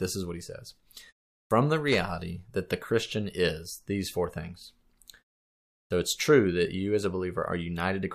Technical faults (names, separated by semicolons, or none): clipped start after a pause